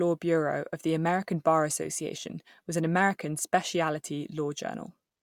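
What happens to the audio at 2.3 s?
Nothing goes wrong at 2.3 s: the speech carries on intact through that moment, with no dropout, click, glitch or other fault to be heard.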